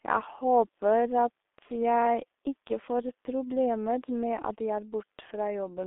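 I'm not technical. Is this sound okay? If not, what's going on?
No. The speech passes through a G.723.1 codec, an old internet-phone system, for the whole clip. Nothing above about 3.7 kHz survives, so it sounds muffled and hoarse. Heavy squeezing blurs consonants.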